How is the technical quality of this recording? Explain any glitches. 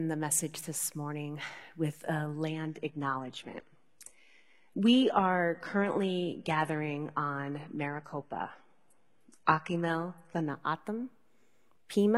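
The quality is compromised by one stretch of adaptive stream at a lower bitrate. From 2.50 s, right after "this morning with a", until 10.50 s, the speech abruptly drops in quality as codec artefacts rise. That fits the player switching from a roughly 96 kbit/s AAC stream to a 16 kbit/s HE-AAC one while the connection slowed. Unlike a buffering dropout, the sound never stops. The quality simply steps down, then back up eight seconds later.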